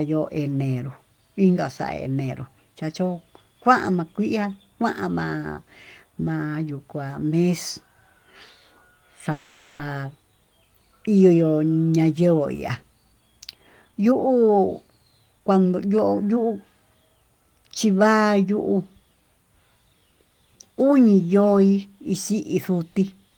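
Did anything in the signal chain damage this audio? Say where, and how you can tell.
Yes. From 9.31 to 9.81 s the sound holds on its last moment and smears into a fading buzz for about 480 ms, then picks up exactly where it stopped, with nothing skipped. This is a call audio freeze at the network and jitter-buffer stage. Packets were likely delayed in transit, so the receiver's buffer ran dry and it stretched out the last audio until they arrived, adding roughly 480 ms of delay.

From 13.53 to 16.81 s the speech runs at about 115% speed without any change in pitch, so it comes across as rushed rather than higher. This is jitter buffer speed-up, also at the receiving buffer. The buffer held more than its target, so the receiver repeatedly cut out pitch-period-sized slices to catch up, trimming about half a second overall.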